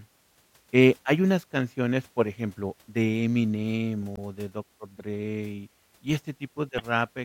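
At 4.14 to 4.18 s, and again at 6.76 to 6.80 s, there's a short blip from damaged data in the compressed stream. Corrupted bytes made the decoder misread frames and lose sync until it found the next frame header, giving roughly 40 ms glitches.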